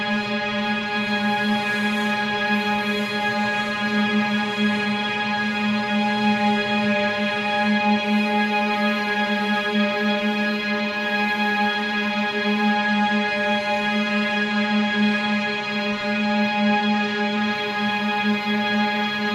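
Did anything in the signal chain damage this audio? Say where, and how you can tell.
No, nothing in the signal chain audibly damaged this audio.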